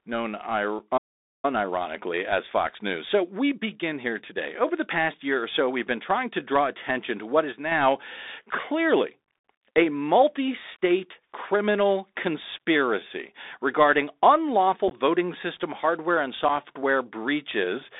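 Throughout, the speech carries the Bluetooth CVSD headset codec. The band runs only from about 250 Hz to 3.7 kHz, which points to a 64 kbps CVSD link. Its one-bit adaptive steps leave scratchy s sounds, a granular hiss, and plainly audible distortion on louder peaks.

At 0.79 s comes unconcealed Bluetooth headset packet loss. About 7.5 ms of audio, likely a couple of packets, is simply missing. Nothing fills the gap, so there is a tiny hard-edged hole.

From 0.97 to 1.45 s there is a playback stall. The speech stops dead for about 460 ms, then carries on. The likely cause is that the player ran out of buffered data or was briefly blocked.

A time-compressed catch-up follows from 1.45 to 4.45 s. The player clears its backlog by playing about 1.1 times faster. Small pieces are cut out and cross-faded, so the speech sounds hurried at normal pitch.

The packet loss returns from 14.88 to 14.91 s. 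Several packets drop, about 22.5 ms in all, scattered over 30 ms with a longest gap of 15 ms. It sounds like a brief crackle. One more short hole of about 7.5 ms comes at 16.49 s.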